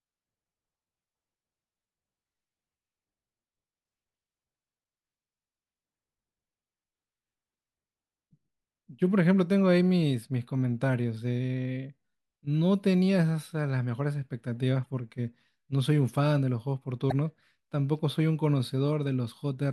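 At 14.82 to 14.86 s and again at 17.08 to 17.12 s, the speech breaks into a short burst of damaged data in a compressed stream, each lasting about 40 ms. Corrupted bytes make the decoder misread those frames and lose sync until it finds the next valid header.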